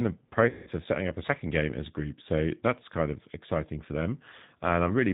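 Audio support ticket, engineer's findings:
G.729 codec, whole clip. Nothing above 4 kHz, rough synthetic timbre, consistent with an 8 kbit/s pulse-based speech coder rebuilding the voice from filter and pitch parameters.

VoIP packet loss concealed by the speech codec, 0.49 to 0.71 s. About 180 ms missing. Decoder stretches the last pitch and filter into a fading buzz or coloured noise, and the voice stays weak briefly after recovery.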